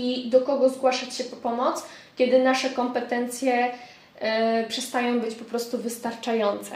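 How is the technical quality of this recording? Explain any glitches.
No glitches turn up anywhere in the recording. There are no dropouts, jumps or sudden changes in level to point to.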